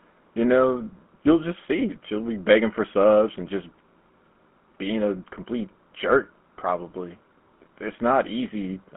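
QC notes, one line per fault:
Throughout: GSM full-rate codec. The speech carries a buzzy, gravelly roughness, plainly audible, with nothing heard much beyond a telephone band of about 200 Hz to 3.4 kHz. The sound points to a roughly 13 kbps coder that models the vocal tract as a filter and feeds it a sparse train of regularly spaced excitation pulses, discarding two of every three excitation samples. That coarse excitation causes the grit. On a spectrogram, energy stops abruptly near 3.4 kHz and harmonics look smeared and grainy.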